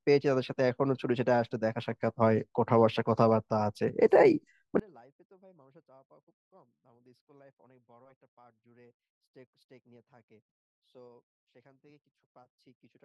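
A speech clip in which, from 4.80 s to the end, one stereo channel has likely been inverted in polarity, so the two channels cancel when summed to mono. The centred voice drops by about 33 dB, leaving only a faint residue of the channel difference.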